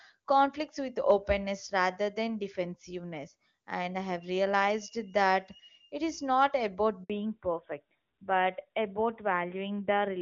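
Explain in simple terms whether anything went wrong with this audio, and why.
Right around 7.04 seconds there's a handover gap: the phone switched the call from one network to another, and for about 60 milliseconds, until 7.10 seconds, no speech got through at all. You hear the voice drop out abruptly into silence and then pick back up. It's brief, but whatever was said in that sliver is simply gone, not muffled or garbled.

Straight after that, from 7.10 seconds to the end, there's a fallback to narrowband. Before the switch the call was running on HD Voice and sounded full and clear. After it, the new network put the call on an older phone codec that can't carry anything above 4 kHz. That's why the last few seconds sound duller and a bit rougher, with the crisp top end of the voice missing, like an old-style phone call.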